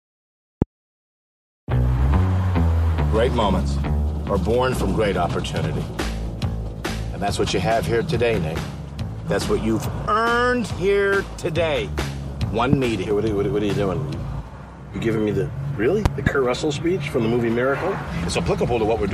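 Loud pops at 0.62 s, 12.73 s and a double pop from 16.06 to 16.29 s jump about 20 dB above the sound, which keeps running beneath. This is unlike a dropout, and the likely cause is a plug, switch or static discharge.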